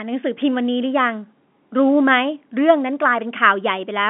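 No faults found in the speech; the G.711 telephone channel carries it as designed, passing a 200 Hz to 3.5 kHz line band with nothing above 3.8 kHz.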